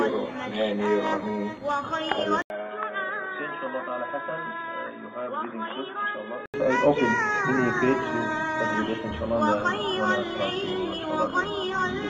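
The audio drops out for a brief gap of about 80 ms at 2.42 s, then returns duller, boxier and roughly 10 dB quieter, with nothing above 3.8 kHz and a faint new background noise sitting roughly 45 dB below the signal. At 6.54 s the full bandwidth and level come back. This is likely an input switched to a poorer device, with the recording path moving briefly to a narrower-band microphone or headset call profile and then back again.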